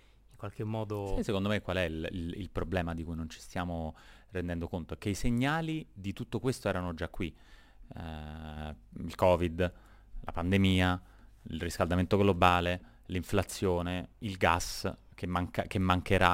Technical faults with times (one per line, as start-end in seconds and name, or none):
0.00-16.34 crude rate conversion